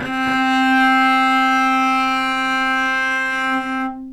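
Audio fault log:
throughout, doubled audio track: every sound is followed by a second full-band copy about 300 ms later and around 5 dB quieter, with no decay or room colour, likely because the audio was captured twice, once through a slower path.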